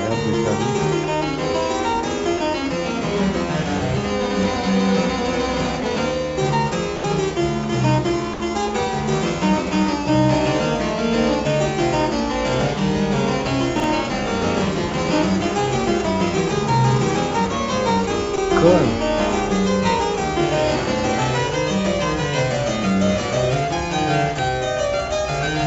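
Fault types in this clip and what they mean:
Sound dropped by the voice detector: at 6.96 to 7.04 s, 8.34 to 8.40 s and 18.36 to 18.38 s, the sound briefly gives way to a flat, featureless hiss lasting 80, 60 and 20 ms, then returns. This is likely the sender's voice detector judging those moments to be background and pausing transmission, with the receiver filling each gap with comfort noise. The wideband call audio, which has nothing above 8 kHz, resumes as soon as the detector reopens.
Chunks out of order: at 13.76 to 13.84 s, a 40 ms chunk of audio plays one chunk late, swapped with the chunk that should have followed it. No sound is missing, but the sequence is scrambled for that short stretch. The result is a brief garbled jolt, marked by three abrupt joins.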